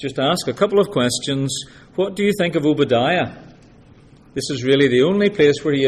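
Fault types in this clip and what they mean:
No technical faults to report in this audio.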